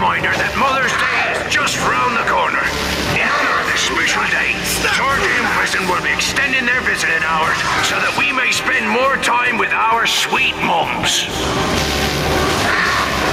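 Gain pumping runs throughout: the gain ducks by about 15 dB under each loud sound, likely from excessive input gain driving a fast limiter.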